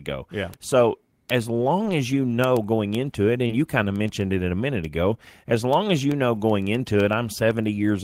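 A speech clip with three kinds of fault. Word clock ticks run from 0.16 s to the end. Sharp ticks recur about every 0.15 s, roughly seven per second. The receiving device runs on its own clock, not locked to the sender's. A mismatch of about 200 parts per million makes one sample slip at each crossing. A short concealed packet loss sits at 3.47 to 3.51 s. About 20 ms of audio failed to arrive in time. The receiver filled about 17 ms by extending the preceding sound, then blended back. The result is a brief smear at that point. A lost packet rebuilt from error correction is heard at 3.49 to 3.51 s and again at 6.35 s. Each lasts about 20 ms, which points to one packet lost each time. The decoder played a low-bitrate copy carried in the next packet. There is no gap, but those moments sound rougher and noisier.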